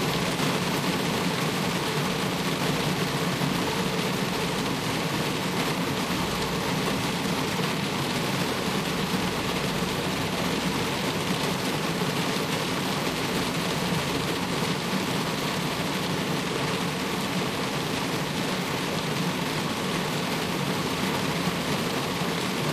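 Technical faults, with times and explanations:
Nothing in this audio stood out as a technical problem on listening.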